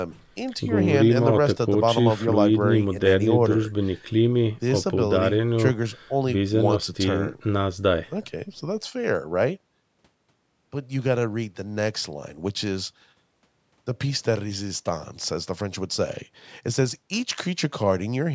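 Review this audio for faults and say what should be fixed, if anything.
No faults found; nothing to fix.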